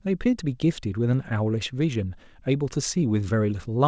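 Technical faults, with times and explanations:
Throughout, clock drift between sender and receiver: the sending side's audio clock runs roughly 5 percent fast, so audio reaches the jitter buffer quicker than it is played out. The buffer keeps overfilling, which forces the small trims heard across the clip.
0.18 to 3.73 s, repeated timing corrections: the receiver keeps discarding short slivers of speech to stay level with a sender running at 105 percent. The cuts all go one way but fall unevenly, giving faint hiccups and a slightly unsteady pace over the 8 kHz band-limited call audio.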